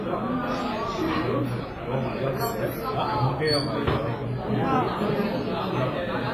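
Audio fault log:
Throughout: WMA compression, likely from a Windows Media Audio encode at a low bitrate, which fits around 24 kbps. The sound carries heavy codec damage. Transients ring and smear, and a washy hiss rises and falls with the signal because each long transform block spreads its quantisation noise over tens of milliseconds. Weak spectral detail has been zeroed, leaving a washy texture. Nothing is present above 15.4 kHz, which dulls the top end.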